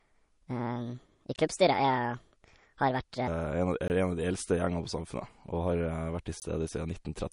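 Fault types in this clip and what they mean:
MP3 compression: The speech has plainly audible watery, swirly coding damage, likely from MP3 encoding at a low bitrate around 40 kbps, where weak frequency lines drop in and out. A spectrogram shows flickering holes and an empty band above 10.6 kHz.
Section at the wrong speed: From the start to about 3.27 s, the speech plays 1.47 times too fast, likely from a wrong clock rate, so it sounds hurried and about seven semitones high. On a spectrogram, the harmonics in this stretch sit higher and are spaced more widely.
Gap between chunks: Short 20 ms holes interrupt the speech at 1.36, 3.88 and 6.40 s, one every 2.5 s, where silence sits between stored chunks. The waveform shows thin flat slices there, and the spectrogram shows narrow blank vertical stripes.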